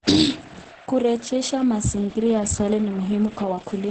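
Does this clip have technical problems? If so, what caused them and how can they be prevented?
Yes. Throughout the speech it sounds muffled and hoarse, with a papery roughness and nothing above about 8.9 kHz. That points to Opus compression in its speech-oriented SILK mode at wideband bandwidth. The encoder models the voice with a compact predictive description instead of keeping full band energies, so fine detail and breathiness come back coarse and grainy. The damage is heavy enough that the likely cause is a very low bitrate, around 12 kbps. To prevent it, encode at a higher Opus bitrate, such as 24 to 32 kbps or more for speech, so the encoder keeps fuller bandwidth and detail.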